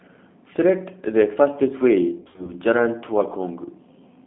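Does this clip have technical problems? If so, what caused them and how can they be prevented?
Yes. Throughout the clip the speech sounds thin, slightly rough and synthetic, confined to roughly 200 Hz to 3.6 kHz. This is G.729 coding at 8 kbit/s, which rebuilds speech from a vocal tract filter, a pitch predictor and sparse pulses, discarding everything above the telephone band. Using a wideband codec with a higher bitrate, such as G.722 or Opus, would prevent this.

From 2.20 to 2.53 s the speech turns buzzy and smeared, dipping and recovering unevenly. This is VoIP packet loss concealed by the speech codec. About 140 ms of audio went missing in gaps scattered over 280 ms, the longest lasting 60 ms. The decoder extrapolated each gap from its last pitch and filter state and faded it, and the speech stayed weak briefly after each gap. Jitter buffering, forward error correction or a more reliable network path would prevent this.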